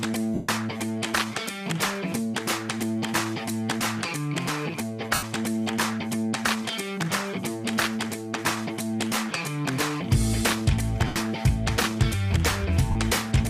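Bluetooth LE Audio frames were lost at 0.34–0.49 s (about 142 ms), 5.14–5.23 s, 11.07–11.16 s and 12.91–12.95 s, with gaps pointing to 7.5 ms LC3 frames. The decoder refills each gap with the previous spectrum under random signs, so tones blur into a brief noisy smear that fades.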